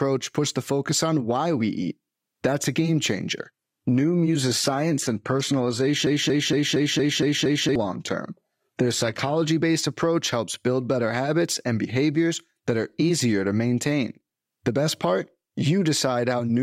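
From 3.47 s to 9.47 s the speech drops abruptly to an adaptive stream at a lower bitrate. The top end thins, with nothing above 14.9 kHz, which fits a switch from 96 kbit/s AAC-LC to 20 kbit/s HE-AAC. Unlike a dropout, there's no gap.

Inside that stretch, from 6.07 s to 7.76 s, a broken-record loop repeats one 0.23 s fragment seven times back to back, likely from the stream stalling on its last buffered piece. The repeats are exact copies rather than stutters, and the speech due there is lost.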